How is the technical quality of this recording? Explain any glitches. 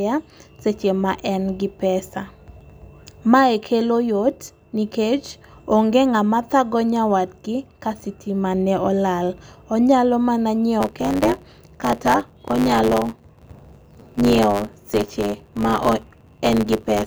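The recording has one clear glitch in its final stretch. From 10.80 s to the end at 17.07 s, the speech takes on a steady 100 Hz buzz and hurries along about 1.09 times too fast while keeping roughly its normal pitch. This is a block size mismatch (truncated): one stage hands over longer blocks than the next accepts, so each block's tail is discarded, shortening the audio and leaving a regular seam a hundred times per second.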